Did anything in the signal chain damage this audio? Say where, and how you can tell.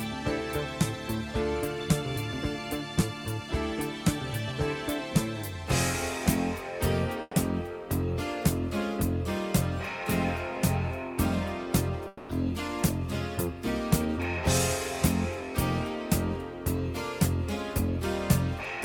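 Yes, the damage happened at the network stage, in two places. The first is a burst of packet loss from 7.21 to 7.35 s. A run of consecutive packets never reached the receiver in time, so about 120 ms of the original audio is missing. The receiver covered the hole by extending the last sound it had and turning it down, then left roughly 20 ms of silence before the stream picked up further along.

The second gap runs from 12.07 to 12.31 s. The last sound stretches on as a fading smear for about 220 ms with no silent stretch, then the audio jumps ahead, and the 220 ms that would have played there is gone. This is likely a long network dropout, where the connection stalled and the receiver's concealment covered the entire missing span.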